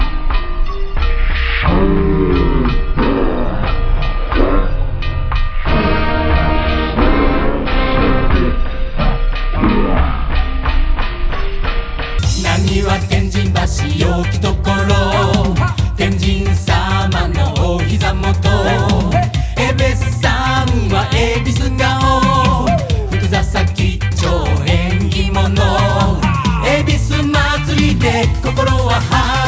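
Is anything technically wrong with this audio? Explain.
Yes. Wrong sample rate, 0.00 to 12.19 s: the audio plays at a third of its proper speed, consistent with 48 kHz material clocked out at 16 kHz, so it drags and drops about 19 semitones.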